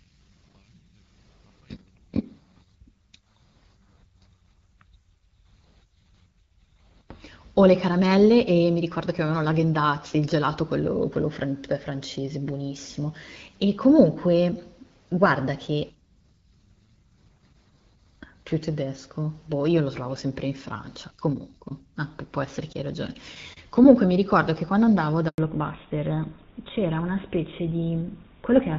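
A handover gap interrupts this speech recording at 25.28 s. The call was passed from one network to another, and for about 100 ms no speech frames came through. The voice fades within a few tens of milliseconds and stays silent until the new link picks up at 25.38 s, so whatever was said in that tenth of a second is gone. Until then, the wideband coding sounds clear with only light codec colouring, which fits AMR-WB HD Voice at around 12.65 kbit/s. The new link brings a fallback to narrowband from 25.38 s to the end of the recording: the call drops out of HD Voice onto an older codec, and the character of the sound points to GSM full rate at around 13 kbit/s. Nothing above 4 kHz survives, so the sibilants and airy top that were present before vanish, and the voice turns duller and rougher for the final few seconds.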